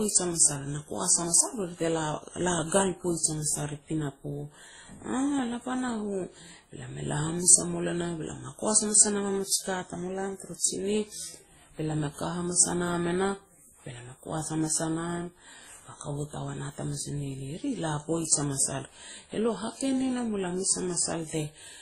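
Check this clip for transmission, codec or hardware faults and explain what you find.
Audio faults are present: one problem runs through the whole speech clip, transcoding between lossy codecs.

From start to finish, several kinds of coding damage are heard together, and nothing is present above 14.8 kHz. The sound points to a chain of low-rate encodes, likely WMA, then Opus, then WMA again, at rates around 24 to 32 kbit/s. Each later encoder spent bits re-coding the earlier artefacts and added its own, while the lowest cut-off stayed. A single low-bitrate encode has one consistent artefact character. Here, the mixed, layered artefacts set it apart.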